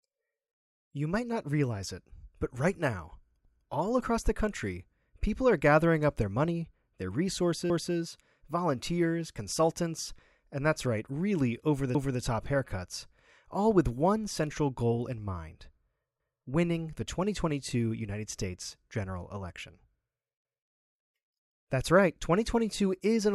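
At 7.70 to 7.95 s, just before "volunteers consultants and that's", and again at 11.95 to 12.2 s, between "right really over the" and "top haircuts", overlapping chunks replay a 250 ms slice of speech. The joins arrive 4.25 s apart, and that fixed spacing with an exact repeat, rather than a gap, separates this from dropouts.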